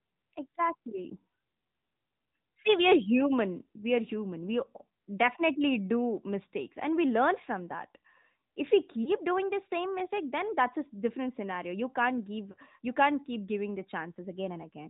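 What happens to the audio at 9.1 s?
From 9.04 to 9.11 s there is a lost AMR speech frame, about 20 ms, which sounds like a single dropped frame. The decoder repeats the previous pitch and vocal-tract settings at falling gain, giving a brief dip or warble. This shows as a short amplitude sag and a smeared, dimmed patch. The AMR narrowband mobile codec is active here too, with plainly buzzy, synthetic coding that fits a mode near 10 kbps. A spectrogram would show nothing above 4 kHz.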